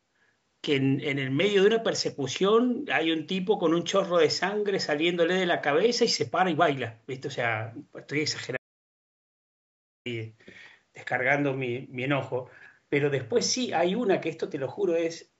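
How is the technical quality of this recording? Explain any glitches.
There is one glitch, an audio dropout to silence. From 8.57 s to 10.06 s the input signal was likely lost while recording continued writing silence, so the speech cuts off into about 1.5 s of complete silence, with no room tone, before resuming. The band limit to 8 kHz comes from call microphone processing and is expected, not a fault.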